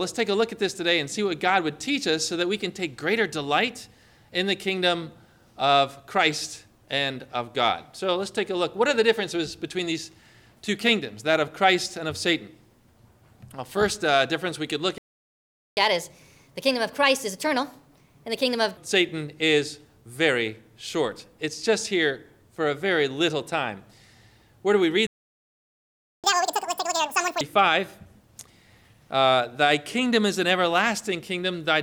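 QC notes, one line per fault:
14.98–15.77 s and 25.07–26.24 s, playback stall: the sound cuts out mid-flow into silence, first for about 0.79 s, then for about 1.17 s. Nothing reaches the output during these gaps. The likely cause is the player running dry of data or having its thread blocked. The second stall is longer than the first.
15.77–18.77 s and 26.24–27.41 s, catch-up at higher speed: right after each stall the player races through its backlog. The first run plays at 1.25x for 3 s, with pitch up about four semitones. The second plays at 2x for about 1.17 s, with pitch up about ten semitones. Speeding up by resampling lifts speed and pitch together. The sound then drops back to normal rate.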